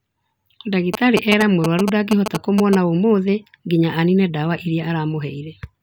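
A speech recording with GSM signalling bursts from 0.94 to 2.75 s: a galloping dit-dit-dit of short 217 Hz buzzes, roughly as loud as the speech. A nearby 2G phone is handshaking with the network, and the audio circuitry rectifies its radio bursts.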